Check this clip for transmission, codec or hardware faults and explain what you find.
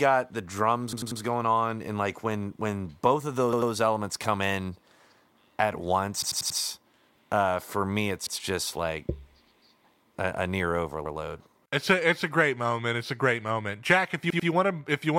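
Repeated buffers occur six times in the speech: at 0.93 to 1.21 s, 3.53 to 3.72 s, 6.22 to 6.60 s, 8.27 to 8.36 s, 11.05 to 11.15 s and 14.30 to 14.49 s. When fresh audio failed to arrive, the device replayed its last block, about 93 ms long (which fits a 4096-sample buffer), between one and four extra times. Each event is a rhythmic stutter with hard joins, and the speech then picks up with nothing audibly missing. On a waveform the same 93 ms shape appears back to back. On a spectrogram the block tiles horizontally, with a vertical line at each seam.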